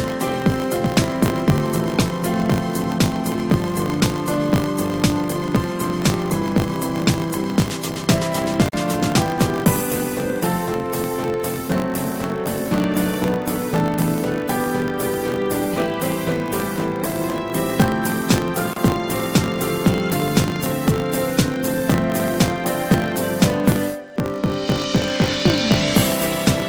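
Filter restarted on every block, running from the start of the clip to its end: a 50 Hz buzz rides under the sound, made of small ticks at each block boundary, which fits blocks of about 20 ms. The filter's memory is cleared between blocks, so each one starts from silence and opens with a tiny transient. The buzz grows and shrinks with the signal's level, becoming most obvious in louder passages and receding when the sound is quiet.

Gap at a join of encoded pieces, at 8.69 s and again at 18.73 s, about 10 s apart: the continuous sound drops out for about 46 ms the first time and about 31 ms the second, then resumes from where it stopped. Each piece was encoded separately and butted together without trimming, so the encoder's start-up delay and the padding of its final frame remain as silence. The codec smears the edges of each dropout, so the silent part is shorter.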